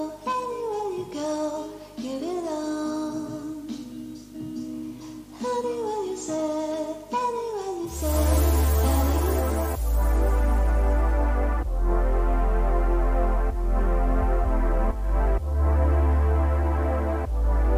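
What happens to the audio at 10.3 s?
At 10.3 s the audio carries video or display buzz, present across the whole clip rather than starting there. A screen or video cable is coupling into the audio path, producing a 50 Hz buzz at the field rate with hash above it, plus a thin whine at 15.6 kHz from the line scan, sitting roughly 25 dB under the signal. A spectrogram shows a comb of 50 Hz harmonics and a steady line at 15.6 kHz; the waveform carries a periodic ripple.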